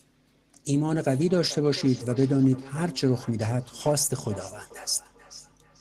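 From 0.81 s to the end, a second device's playback feeds back into the microphone, causing feedback echo between two devices: speech returns roughly every 400 ms, about 20 dB down.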